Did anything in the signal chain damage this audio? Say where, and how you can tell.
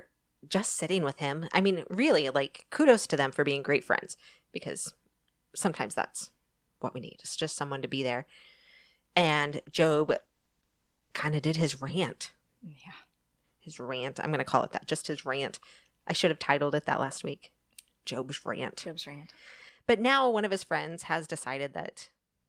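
Yes. A call bitrate drop in the codec stage runs from 9.17 to 13.23 s. The speech turns coarser and rougher, most degraded for about 2 s, which fits the encoder falling from roughly 32 to 15 kbps after a lower bandwidth estimate, then recovering.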